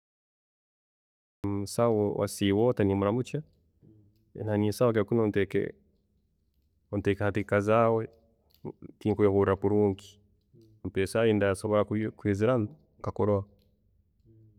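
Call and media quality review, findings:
Cut-off start, speech. Digital silence 0.00 to 1.44 s, then sound enters abruptly mid-utterance at 1.44 s with no attack or fade-in. Probable component: capture or stream start logic. Recording began after the talker had already started, truncating the opening.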